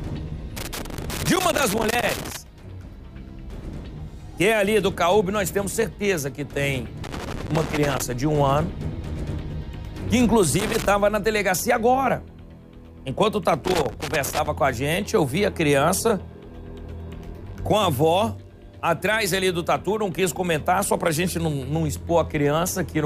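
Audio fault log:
0.57–2.37 s, 7.04–8.02 s, 10.59–10.86 s and 13.65–14.48 s, loose connector crackle: irregular bursts of scratchy crackle break up the sound, the first lasting nearly two seconds. A worn or dirty contact is making and breaking rapidly as it shifts, chopping the signal on and off.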